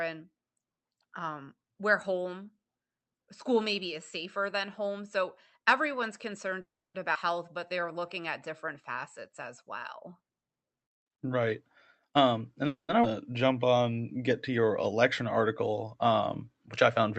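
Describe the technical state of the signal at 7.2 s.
A skip ahead at 7.14 to 7.17 s: roughly 150 ms of audio was dropped, in transit or by an overflowing jitter buffer, while later audio was waiting, so the speech jumps forward with a near-seamless splice.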